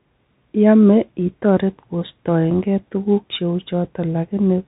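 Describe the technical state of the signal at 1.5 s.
At 1.5 s the speech is running through the Bluetooth CVSD headset codec, as it does for the whole clip. Each sample is coded as a single up-or-down bit, which fits a 64 kbps stream, and the step size adapts. Nothing above 4 kHz gets through, s sounds come out scratchy where loud high sounds outrun the step, and a granular hiss sits beneath the speech. That slope-overload grit and hiss set it apart from a plain narrowband telephone filter.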